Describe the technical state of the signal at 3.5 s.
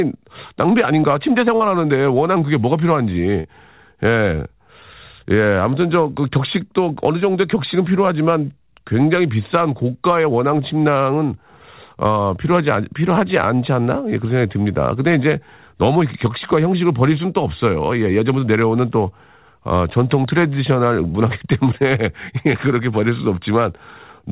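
Just before 3.5 s, from 3.40 to 3.47 s, there is a short concealed packet loss: about 40 ms of audio never reached the decoder, so the receiver filled the gap by extending the preceding sound and then blended back in. It is heard as a brief smear or wobble. On a waveform the gap shows as a continuation of the preceding sound. A spectrogram shows frozen, slightly blurred bands instead of normal movement, all below the 4 kHz ceiling of the narrowband call path.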